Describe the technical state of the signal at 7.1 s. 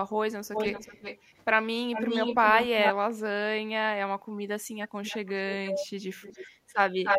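At 7.1 s you're hearing an echo leak, running from 7.03 s to the end at 7.18 s. A copy of the speech comes back about 0.3 s late and about 5 dB louder than the original, likely a speakerphone whose echo canceller let its own pickup slip through and back down the line.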